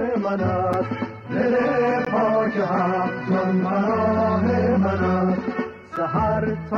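At 0.73, 2.05 and 5.96 s there's a block of digital silence, with the audio cutting out for about 5, 17 and 7 ms. There's no fade either side, and the first and last land as ticks while the 2.05 s one opens a brief hole.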